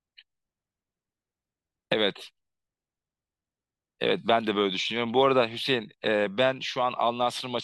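The converter's sampling clock wanders throughout the clip, so each sample is taken a fraction of a microsecond early or late at random. This is sample clock jitter. Because the timing error turns into an amplitude error wherever the waveform is changing quickly, the resulting noise sits roughly 45 dB below the speech. It comes across as a faint hiss and grit that thickens on loud and sibilant sounds and disappears in the pauses.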